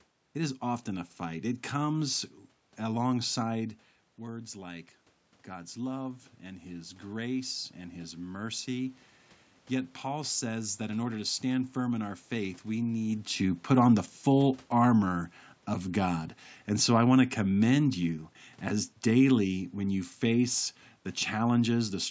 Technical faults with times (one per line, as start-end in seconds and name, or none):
4.19-9.04 automatic gain rising